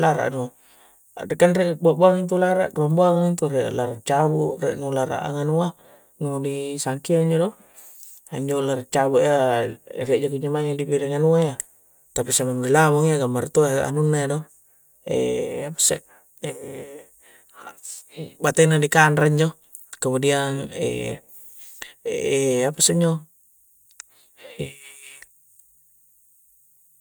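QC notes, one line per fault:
No faults found in this speech recording. Nothing here needs a timestamp.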